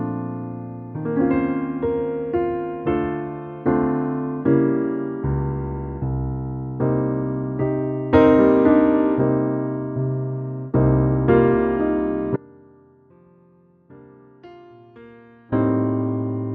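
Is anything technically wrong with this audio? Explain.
Yes. From 12.36 to 15.52 s there is an audio dropout to a faint residue. For about 3.2 s the sound cuts abruptly to a weak leak roughly 25 dB down, then snaps back. This is likely a signal loss upstream while the later path stayed live. The waveform collapses to a thin band, and the spectrogram shows a sharp-edged, near-empty block.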